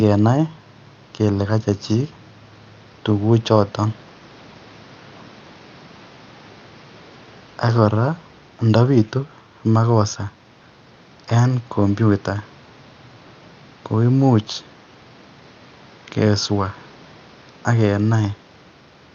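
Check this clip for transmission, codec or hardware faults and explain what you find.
The clip shows no transmission, codec or hardware faults.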